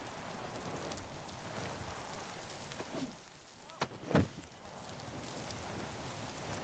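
Nothing above 8 kHz reaches the signal, a band limit consistent with a call microphone chain and an Opus call path at a bitrate that sounds like about 32 kbps, and the audio holds steady with no dropouts, glitches or level problems anywhere in it.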